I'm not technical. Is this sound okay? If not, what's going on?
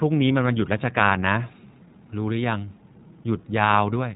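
No. From start to finish the speech sounds thin, a little rough and slightly robotic, as if heard over an old phone line. This is the iLBC codec, a phone-call compressor that rebuilds speech in 20 ms chunks and removes everything above about 3.8 kHz.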